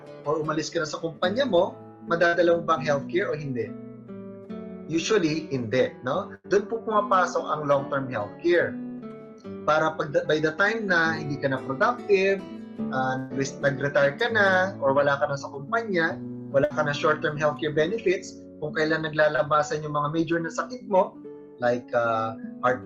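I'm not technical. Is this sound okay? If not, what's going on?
No. In four places the sound briefly stalls and then skips ahead. This is a burst of packet loss: on a call, several chunks of audio in a row were lost or arrived too late to play. At about 2.27 to 2.35 s, 6.35 to 6.46 s, 13.18 to 13.32 s and 16.64 to 16.72 s, the receiver stretches out the last bit it had, fading it as a held buzz or hiss. When the sound comes back, roughly 60, 100, 120 and 60 milliseconds have been lost.

A smaller glitch, a short concealed packet loss, comes at about 19.36 to 19.40 s. Only about 20 milliseconds went missing here, and the gap is patched so quickly that it comes across as a tiny smear or wobble rather than a held, fading sound. That brevity is what separates it from the earlier bursts, where you can hear the sound hang before it jumps forward. Outside these moments, the sound has the slightly dulled top end typical of a call codec.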